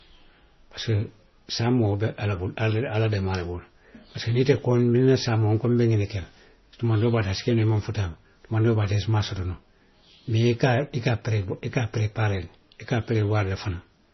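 Throughout the speech the audio shows heavy MP3 compression artefacts, likely from encoding at a very low bitrate around 24 kbps. Nothing remains above 5.9 kHz, and weak frequency lines flicker between frames, giving a watery, swirly texture with smeared consonant attacks.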